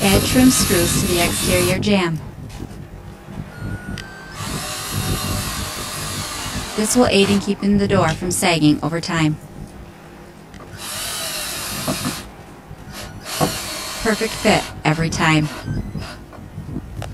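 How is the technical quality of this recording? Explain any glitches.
The recording has one fault, and it lasts the whole clip. It is channel delay, heard as comb filtering. One channel runs late by about 20 ms, and the two are summed to mono. Content shared by both channels cancels at evenly spaced frequencies. The first notch sits around 30 Hz, with further notches roughly every 50 Hz above it. The result is a rough, slightly doubled sound throughout.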